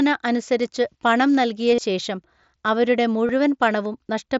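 At 1.75 to 1.81 s, between "അനുസരിച്ചു പണം നൽകിയ" and "ശേഷം അവരുടെ", concealed Bluetooth headset packet loss occurs. About 52 ms of audio is missing, scattered over 90 ms, with the longest gap 37.5 ms. The receiver fills each hole by repeating a recent stretch of waveform, which produces a brief buzzy, held tone and a slight warble as real audio resumes. At 3.27 to 3.29 s, after "പണം നൽകിയ ശേഷം അവരുടെ", a shorter 22.5 ms loss occurs.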